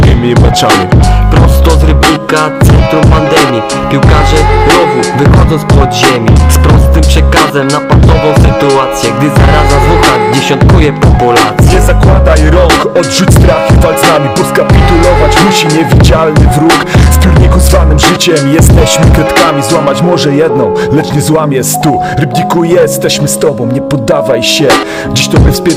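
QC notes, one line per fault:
Throughout: hard clipping, driven about 14 dB too hot, so roughly a fifth of samples get flattened, giving harsh fuzz on every loud moment.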